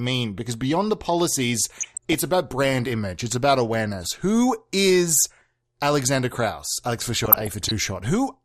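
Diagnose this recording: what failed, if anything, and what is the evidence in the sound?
Codec stage: the whole recording sounds dull, with granular gurgling, which points to likely MP2 compression at a low rate near 80 kbps, upper sub-bands switched off.

Reception stage: DAB burbling from bit errors slipping past error correction corrupts samples, giving short blips of noise in single sub-bands at 1.80–2.14 s, between "beyond the policies" and "about brand image", and 7.25–7.71 s.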